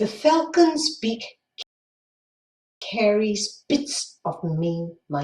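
The player likely ran out of data, causing a playback stall from 1.62 s to 2.82 s: the speech cuts to silence for about 1.19 s, then resumes.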